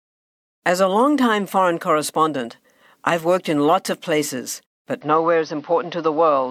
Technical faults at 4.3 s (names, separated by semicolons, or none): none